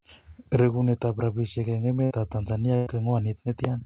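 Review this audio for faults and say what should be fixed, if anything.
Two short stretches of the speech are held and smeared before the audio jumps ahead, at 2.04 to 2.12 s and 2.76 to 2.88 s. Each is a burst of packet loss. The receiver extended the last received sound while fading it, for 64 ms and then 100 ms, and about 60 ms and 100 ms of audio are missing. The G.711 A-law call path cuts everything above 4 kHz. To prevent this, improve network stability or add forward error correction and a larger jitter buffer so lost or late packets can be recovered.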